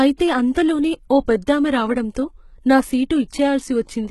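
From start to finish the speech carries a gritty, metallic sheen in its upper range, and the s sounds come out lispy and smeared rather than crisp, with nothing at all above about 11.8 kHz. This is likely HE-AAC compression, heavily applied at a rate that points to something around 16 kbps. Only the lower spectrum is truly coded, and the treble is rebuilt by copying lower bands upward, so its harmonics no longer line up with the real ones.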